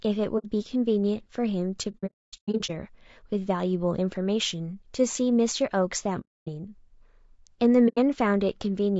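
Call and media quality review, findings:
Rough, grainy speech throughout, noise between harmonics, thin synthetic-sounding top band. Likely low-delay AAC compression (AAC-ELD); short frames resolve pitch harmonics poorly, and the audible damage fits a low bitrate around 32 kbps.

AAC frame loss with muting: soft-faded dropouts at 0.38–0.45 s, 1.91–2.70 s (broken holes, longest run about 0.3 s), 6.20–6.48 s and 7.88–7.99 s. Lost frames zeroed by the decoder; overlapping windows fade audio out and back in.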